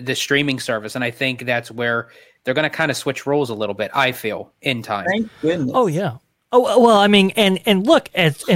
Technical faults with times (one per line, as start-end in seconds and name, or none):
none